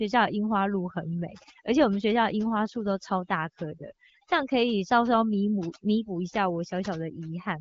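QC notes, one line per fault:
throughout, overdone noise removal. The background drops, with twinkling specks where stray bands flicker in and out. A noise reduction stage was set too hard. It pulls individual frequency bands far down whenever they sit close to its noise estimate, so the quieter parts of the voice are cut along with the noise. The band limit at 7.4 kHz and the clean coding fit a 12.65 kbit/s HD Voice link working normally.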